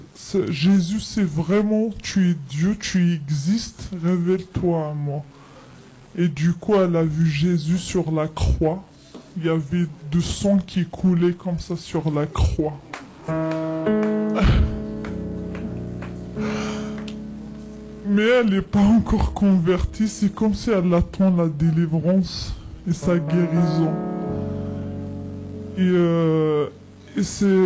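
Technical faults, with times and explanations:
Throughout, wrong sample rate: everything runs slow and low, at 0.73 times speed and about 5.5 semitones down, which fits 22 kHz audio played back unconverted at 16 kHz.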